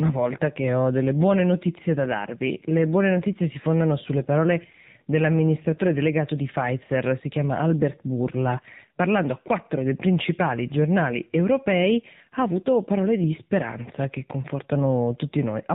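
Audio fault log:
Throughout: AMR narrowband mobile codec. The speech is squeezed into a telephone band, with nothing audible above 4 kHz, which fits 8 kHz sampling. Voices come out thin and muffled, missing their crisp sibilant edges. The codec models the vocal tract and drives it with a few pulses per 5 ms subframe. At this low rate that model is coarse, so the speech sounds plainly buzzy and synthetic. The sound points to a low mode, around 7.4 kbps.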